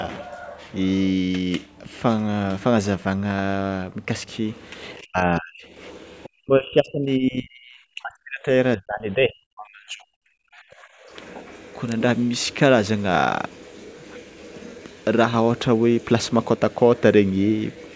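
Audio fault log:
4.99–11.02 s, speech suppressed in double talk: the level drops about 40 dB at 4.99–5.65, 6.35–8.48 and 8.77–10.22 s and about 35 dB at 10.43–11.02 s, likely because the echo canceller ducked the talker while both sides spoke. The waveform shows collapsing envelopes and the spectrogram shows faded, gapped bands.
6.23–6.29 s, other side's voice leaking through: a brief scrap of a second voice sits roughly 25 dB under the speech, likely uncancelled loudspeaker echo. It shows as a faint, isolated smudge of harmonics on the spectrogram.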